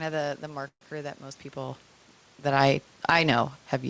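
At 0.68 s, just after "of the the", packets were most likely held up in transit and the jitter buffer ran dry, causing a call audio freeze. The receiver stretched the last sound into a fading buzz or hiss that decays into about 90 ms of silence, filling a 133 ms hole. At 0.84 s the audio resumes at "that most people" with nothing lost, but everything after it now arrives 133 ms later.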